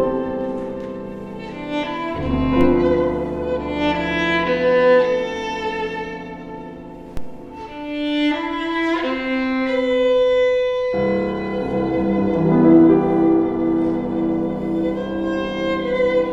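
A DC step shifts the waveform's zero line by about -15 dBFS at 2.61 s and 7.17 s, each producing a low thump or click, with the offset then decaying through a 2 Hz high-pass.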